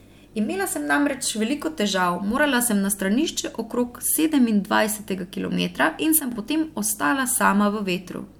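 A gain setting was likely applied from one sample to the next with no ramp, causing a sudden gain jump from 6.2 to 6.32 s, after "okrog sedemindvajsetega kilometra in". Speech and background noise drop together by about 8 dB, recovering before "potem ostala".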